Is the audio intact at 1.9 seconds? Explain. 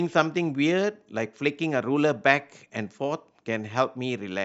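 Yes, the audio is intact at 1.9 seconds, with no fault at that moment.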